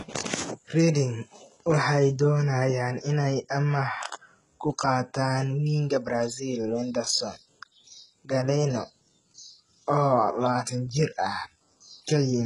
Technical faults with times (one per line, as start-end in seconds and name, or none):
0.00-12.46 HE-AAC compression